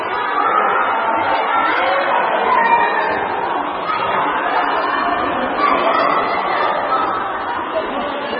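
From start to finish the audio stops dead at about 5.5 kHz and has a heavy watery, swirling texture, with sharp transients smeared. That's likely MP3 compression, squeezed hard enough to suggest a very low bitrate around 16 kbps, so weak detail keeps flickering in and out.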